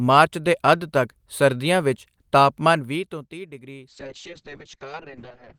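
From 3.89 s, right after "ਵੀਹ ਤੋਂ ਤੀਹ ਡਿਗਰੀ", the speech turns rough and muffled, with a watery, smeared texture that lasts to the end of the clip at about 5.6 s. This is a call bitrate drop. The bandwidth estimate fell and the encoder coded far more coarsely, consistent with a fall from around 32 kbps to about 6 kbps. The audio band also shrinks from 20 kHz to 8 kHz, so the upper detail disappears.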